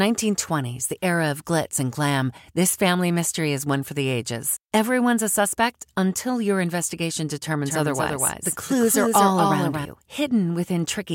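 Right after "suspect until your investigation", at 7.65 s, a doubled audio track kicks in and runs to 9.85 s. A second full-band copy of the speech trails the original by roughly a fifth of a second and sits around 5 dB quieter, with no decay or room colour, so it reads as a dry stutter. It cuts in and out abruptly. The likely cause is the same signal being captured again through a slower path, or an edit holding two copies out of step.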